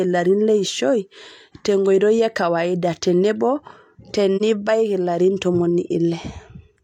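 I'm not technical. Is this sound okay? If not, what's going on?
No. AAC frame loss with muting: a chunk of compressed data, likely one frame, went missing and was replaced with silence, so the speech briefly fades out and back in from 4.36 to 4.42 s.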